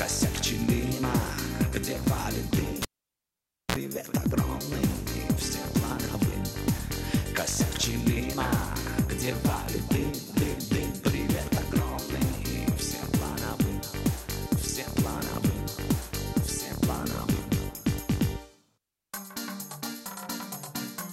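At 2.82 s a live cable is pulled and plugged in. A pop gives way to 0.89 s of near silence. Then comes a 48 ms burst of 60 Hz buzz. A second pop lands at 3.76 s as the sound returns.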